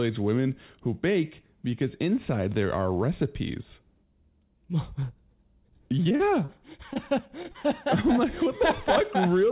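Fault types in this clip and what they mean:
Repeated packet loss (robotic sound): packets went missing repeatedly, each hole filled by extending the preceding sound, so speech turns choppy with pieces missing at 6.04–6.60 s and 6.93–7.56 s. Spectrograms show smeared, repeated blocks below the 4 kHz ceiling; waveforms show abrupt breaks, gaps up to 37 ms.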